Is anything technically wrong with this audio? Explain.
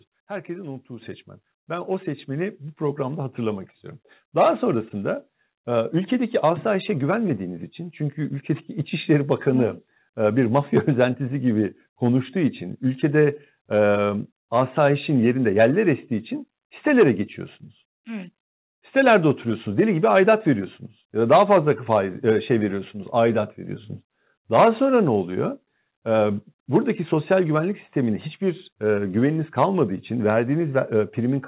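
Yes, the microphone volume gets stepped up twice early on: about 7 dB at 1.02 s and about 3 dB more at 2.19 s. Each is a single abrupt jump where the call software pushes the input gain to compensate for a quiet mic, so speech and background noise both get louder together. The band-limited sound with nothing above 4 kHz, consistent with a G.711 mu-law call path, is separate from these jumps.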